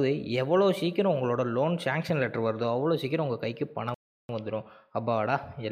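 At 3.94 s the sound cuts out abruptly in mid-flow and stays silent until 4.29 s, a gap of about 350 ms, before resuming. This is a playback stall, likely caused by the player running out of buffered data or its thread being blocked.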